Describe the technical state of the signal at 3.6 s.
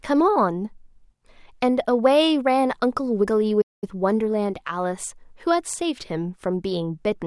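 A playback stall begins at 3.61 s and runs to 3.84 s. The speech cuts to silence mid-flow for about 208 ms, then resumes. The likely cause is the player running out of buffered data, or its thread being blocked, until output recovered.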